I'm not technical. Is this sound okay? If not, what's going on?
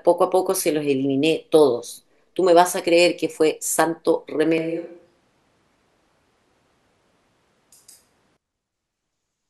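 No, not quite. From about 4.58 to 8.37 seconds the speech suddenly goes roomy and hollow, with less warmth in the low end, a bit quieter, and with more background noise and room sound creeping in. Then it snaps back just as abruptly. That's a switch to a distant microphone: the close mic's signal most likely dropped out, so for those few seconds you're hearing a mic further away, picking up more of the room.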